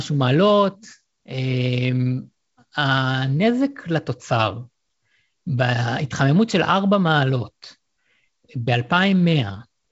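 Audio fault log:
No fault to log: the speech comes through G.722 wideband telephone coding at 56 kbit/s as that coding should sound, with nothing above 7.7 kHz.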